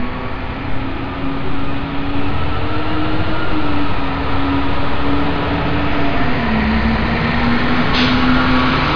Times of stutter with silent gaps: none

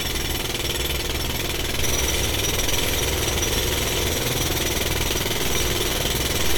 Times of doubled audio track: none

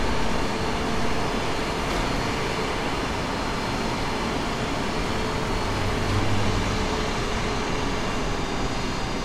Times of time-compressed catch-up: none

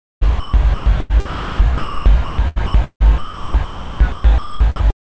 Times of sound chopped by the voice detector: 0.23-4.83

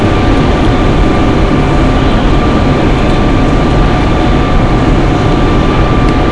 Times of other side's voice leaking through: none

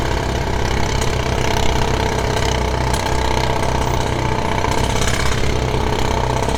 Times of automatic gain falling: none

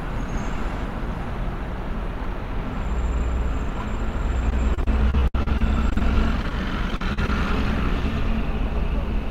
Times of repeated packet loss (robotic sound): 4.50-6.01, 6.90-7.29

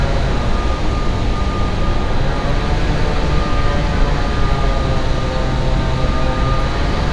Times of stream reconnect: none

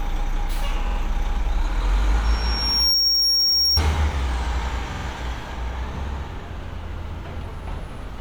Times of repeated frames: 0.84-0.94, 3.02-3.11, 4.88-5.03

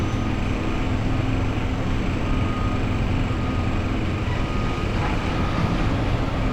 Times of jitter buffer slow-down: none

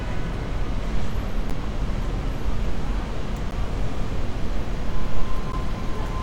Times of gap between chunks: 1.50, 3.51, 5.52

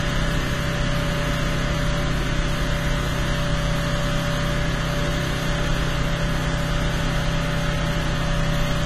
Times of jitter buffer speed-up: none

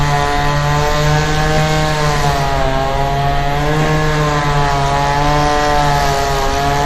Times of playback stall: none

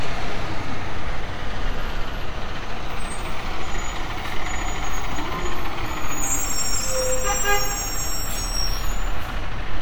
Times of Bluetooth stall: none

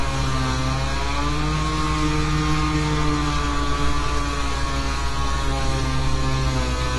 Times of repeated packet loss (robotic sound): none

